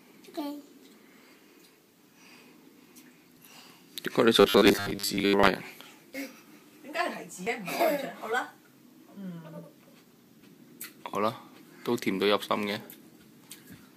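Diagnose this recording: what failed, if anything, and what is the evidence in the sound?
Dropped buffer (overrun) at 3.37, 6.14, 7.47 and 10.41 s: points where the sound jumps ahead by about 40 ms, nearer 100 ms at 7.47 s. This is likely a driver buffer being overwritten before it was read.

Robotic sound from repeated short buffers, 4.41 to 5.48 s: a rigid 100 Hz buzz from a 10 ms block replayed for most of that stretch. This likely points to starved driver-stage buffering.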